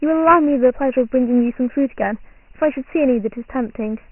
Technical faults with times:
0.00-4.12 Dialogic VOX ADPCM

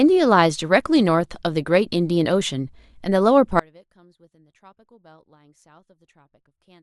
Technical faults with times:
3.59-6.82 audio dropout to a faint residue

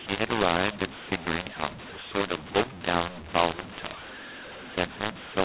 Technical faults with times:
0.00-5.45 mu-law and A-law mixed up

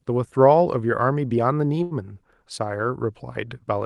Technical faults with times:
1.83-1.93 short stall from a late packet

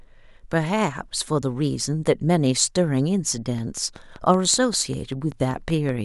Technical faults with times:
3.58-5.90 train of clicks

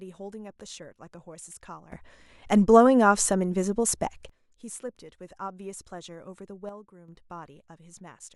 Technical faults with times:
1.92-4.29 sudden gain jump
6.69-7.08 sudden gain jump

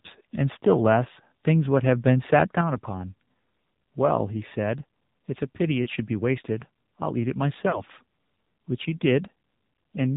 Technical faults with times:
0.00-10.17 AMR narrowband mobile codec
2.61 microphone volume stepped down
5.84-5.89 lost AMR speech frames
7.70-7.83 lost AMR speech frames

